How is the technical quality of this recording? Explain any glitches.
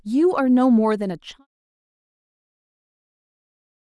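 No glitches or faults detected.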